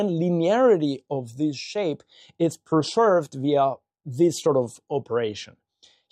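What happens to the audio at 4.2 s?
Nothing goes wrong at 4.2 s; the audio plays through that moment intact, with no dropout, click or distortion.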